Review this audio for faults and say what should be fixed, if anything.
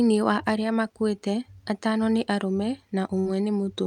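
A short run of packets was lost or arrived too late, a burst of packet loss from 3.19 to 3.28 s, just after "makuite atano nĩ arũme". The receiver covered roughly 60 ms by stretching the last received sound and fading it down, then jumped ahead, so about 60 ms of speech is simply gone and the words resume abruptly. A larger jitter buffer with forward error correction would help the stream survive such bursts.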